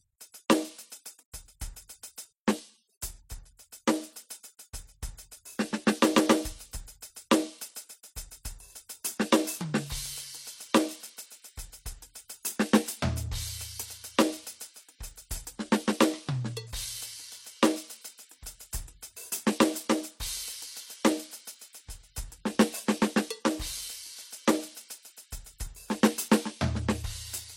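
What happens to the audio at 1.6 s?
The music has most likely been through transcoding between lossy codecs, a fault present throughout rather than starting at 1.6 s. A low-rate MP3-style encode appears to have been re-encoded by an HE-AAC-type codec, whose bits are spent reproducing the first codec's artefacts while it adds its own. At 1.6 s this sounds like a top end with nothing above about 16.2 kHz and two layers of codec artefacts heard together.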